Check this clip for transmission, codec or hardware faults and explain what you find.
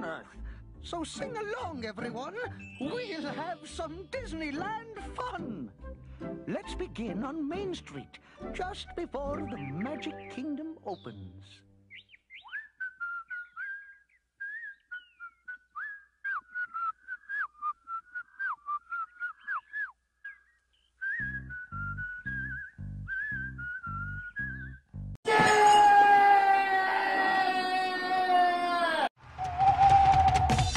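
Nothing in this recording points to a transmission, codec or hardware fault.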